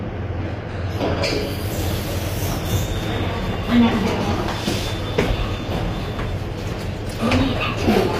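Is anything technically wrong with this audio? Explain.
Yes. Throughout the clip the treble sounds gritty and metallic, with plainly audible damage, likely from HE-AAC compression at a low bitrate near 24 kbps. Spectral band replication copies lower bands upward, so the upper partials fail to align. A spectrogram would show repeated, smeared texture above the crossover and nothing above 15.5 kHz.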